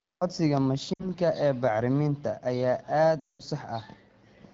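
Lost AMR speech frames at 0.93 to 1.09 s and 3.19 to 3.42 s break up this wideband speech clip. The decoder stretches the last good frame with falling gain, briefly at first, then dropping to near silence within two frames of a 0.2 s gap, which fits about ten frames.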